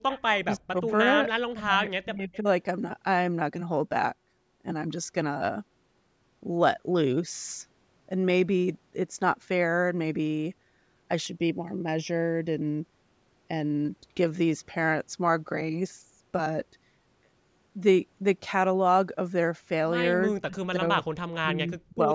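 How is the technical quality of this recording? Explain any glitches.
The recording has three kinds of faults, clustered at the start, the middle and the end of the speech.

Echo leak appears from 0.11 to 0.33 s, and again from 2.33 to 2.37 s. A faint copy of the speech returns about 325 ms late. The first copy is about 20 dB below the speech. The second is fainter, about 30 dB down. The likely cause is a far-end loudspeaker whose echo canceller let some of its microphone pickup through and back down the line.

Speech suppressed in double talk occurs from 0.41 to 0.89 s, 1.56 to 2.47 s, 20.28 to 20.83 s, and 21.21 to 22.11 s. The speech dips sharply, often by about 40 dB, and by about 25 dB in the third case. Within each span, roughly a third to two-thirds of a second is affected. The likely cause is an echo canceller that heard both sides at once, mistook this talker for echo, and turned the signal down.

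Channel delay (comb filtering) runs from 11.27 to 13.85 s. One channel lags the other by around 0.4 ms, and the two are summed to mono. Content common to both cancels at evenly spaced frequencies. The first notch sits near 1.5 kHz, with further notches about every 3 kHz up to the 8 kHz band edge. The speech sounds hollow and phasey for those seconds.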